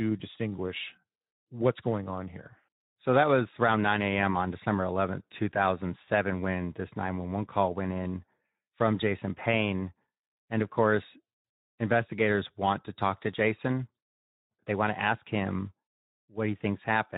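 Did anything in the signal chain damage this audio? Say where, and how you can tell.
Yes. At the codec stage, the whole speech clip carries plainly audible Speex codec damage: a hoarse, noisy texture, and a top end that sounds like shaped hiss rather than real detail. That points to a low-to-middle quality setting, around 11 kbps, where CELP coding has too few bits to model the excitation. Unlike MP3-style transform artefacts, there is no swirly or warbling treble. The roughness sits inside the voice itself.

At the network stage, at 6.05 to 6.08 s, there is VoIP packet loss concealed by the speech codec. The voice briefly smears into a stretched sound that drops in level, and it sounds slightly off for a moment after real audio resumes. This fits a single lost 20 ms frame that the decoder filled by repeating its last pitch and filter at falling gain. A storage or buffer dropout would instead give a hard gap or click, not this brief stretched sound.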